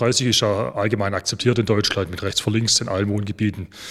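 No faults are audible anywhere in the recording.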